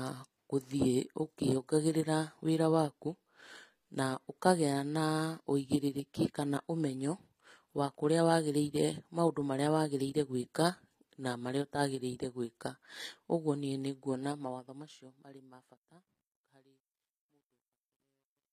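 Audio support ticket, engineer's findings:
Likely HE-AAC compression, whole clip. Plainly audible codec damage. Nothing above 15.5 kHz. Treble rebuilt from copied lower bands, so harmonics misalign at the crossover. S sounds gritty, metallic or lispy. Damage fits a bitrate near 24 kbps.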